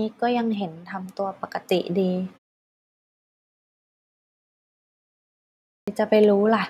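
At 5.74 s, after a pause of about 3.4 s, the speech resumes with a clipped start after a pause. The output device had gone idle and took about 135 ms to wake. The opening sounds are lost, so speech bursts abruptly out of silence.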